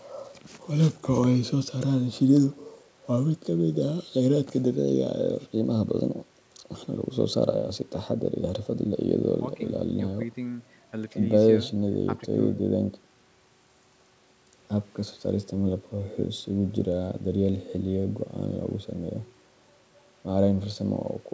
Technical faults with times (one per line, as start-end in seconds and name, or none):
none